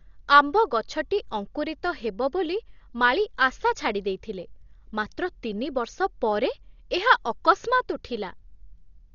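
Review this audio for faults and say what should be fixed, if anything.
Heavy codec damage runs throughout the speech, and Dolby Digital compression is the likely cause. Nothing is heard above 6.9 kHz, and rough, fluttering noise surrounds tonal parts where starved frequency lines were filled with dither, which fits a bitrate near 40 kbps. To prevent it, encode from the original at a much higher bitrate.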